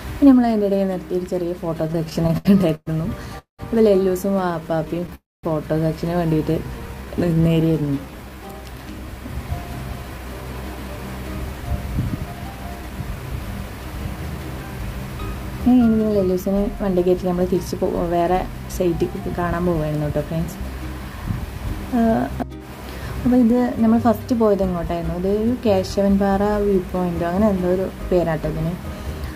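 From 1.87 to 2.88 s the audio falls into repeated stalls (stutter). Packets reach the receiver late, so its jitter buffer runs dry eleven times. Each time it stretches the last sound to cover the wait. About 290 ms is filled this way, 29% of that second, and the longest hold lasts 116 ms. The sound lurches and drags, but nothing is lost. On a spectrogram short smeared, flattened patches interrupt the normal texture. The waveform shows brief repeated stretches with softened envelopes.

Between 3.38 and 3.61 s the sound stops in a call audio freeze. The last sound carries on briefly and fades, then about 130 ms of silence follows. Roughly 202 ms is inserted in total, which pushes everything after it later by that amount. The likely cause is packets held up in transit that emptied the jitter buffer. A spectrogram shows a decaying smear and then a blank band, and the waveform a tapering tail and a flat line.

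From 4.41 to 5.11 s the stutter returns, this time milder. There are nine tiny gaps totalling 67 ms, none longer than 13 ms, and they conceal 10% of the span. The audio drags and stutters slightly. A spectrogram shows only thin vertical seams, and the waveform shows barely visible repeats.

From 5.15 to 5.45 s another freeze holds and fades the sound, then leaves about 220 ms of silence. Around 283 ms is added and playback is delayed further. It looks like the first freeze: a short decaying smear, then an empty gap.

A jitter buffer slow-down runs from 6.64 to 8.53 s. The receiver rebuilds its reserve by repeating single pitch periods and bits of pauses, adding 275 ms. Playback runs at 86% speed with unchanged pitch, so sounds are drawn out. Harmonics on a spectrogram keep their spacing but stretch sideways. The waveform shows near-identical cycles repeated in place.

From 11.38 to 19.45 s a jitter buffer speed-up trims excess delay by cutting short pitch-period pieces, about half a second in all. 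The audio runs at 107% at the same pitch and sounds slightly hurried throughout. Spectrogram features are compressed in time without shifting in frequency, and the waveform shows small seamless splices.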